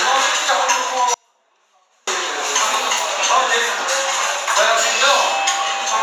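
From 1.14 to 2.07 s there is an audio dropout to a faint residue: the sound cuts off abruptly and, for about 0.93 s, only a faint leak remains, roughly 40 dB down, likely from a brief signal loss while the downstream path stayed live. The waveform collapses to a thin sliver, and the spectrogram shows a sharp-edged, nearly empty band.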